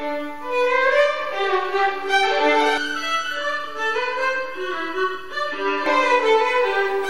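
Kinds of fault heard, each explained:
Channel delay (comb filtering): One channel lags by under a millisecond. Summed to mono, the sound turns hollow from 2.78 to 5.86 s, with notches starting near 700 Hz.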